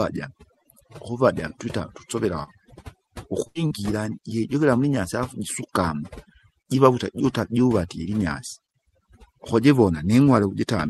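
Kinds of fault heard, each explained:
Overdone noise removal: A noise reduction stage set far too aggressively runs through the whole clip. It pulls individual frequency bands down or out entirely whenever they sit close to its noise estimate, taking the quieter parts of the speech along with them. The background drops away and breaks up into twinkling, chirpy specks.
Short concealed packet loss: Twice, about 40 ms of the call failed to arrive in time, at 2.43 to 2.50 s and again at 3.67 to 3.73 s. The receiver papered over each hole with roughly 35 to 37 ms of synthesized continuation, extending the preceding sound by its pitch or as shaped noise, then crossfaded back into real audio. Each shows up as a brief smear or wobble, and a short consonant there can disappear.
Burst of packet loss: From 3.47 to 3.58 s a longer run of audio, about 80 ms, never made it to playback. The receiver stretched the last sound across the gap for around 79 ms, letting it fade as the gap went on, so it comes through as a held buzz or decaying hiss. 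The speech then picks up further along, with the intervening portion simply gone, and a second, shorter dropout follows only a tenth of a second later.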